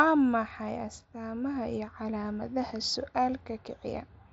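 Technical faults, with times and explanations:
The speech comes through a Bluetooth mSBC headset link, so it is wideband up to about 8 kHz, with the light grain on louder sounds that this codec adds and no technical fault anywhere in the signal.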